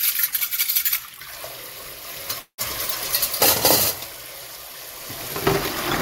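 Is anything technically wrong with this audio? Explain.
Yes. There is a call audio freeze from 2.39 to 2.60 s. The sound stalls and the last moment is stretched into a fading buzz. It sinks to silence for about 90 ms, then the audio resumes exactly where it stopped. Nothing is skipped. Instead, roughly 188 ms of filler is inserted, so everything afterwards runs 188 ms late. The likely cause is delayed packets draining the jitter buffer, with the receiver extending the last sound until data arrived.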